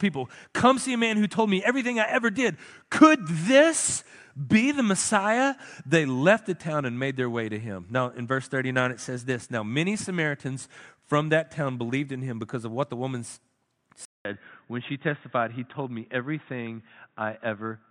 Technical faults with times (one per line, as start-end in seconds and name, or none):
14.05-17.90 input switched to a poorer device